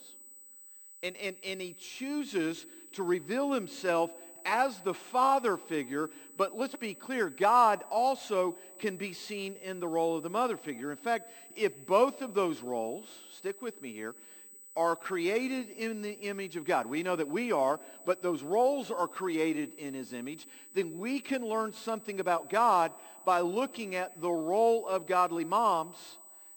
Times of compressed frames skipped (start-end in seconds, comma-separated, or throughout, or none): none